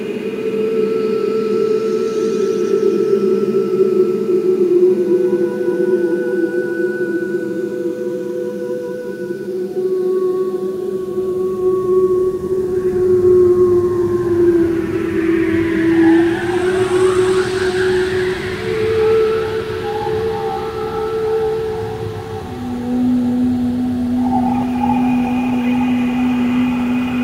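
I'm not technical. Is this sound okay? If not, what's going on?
Yes, nothing stood out as wrong when listening to it.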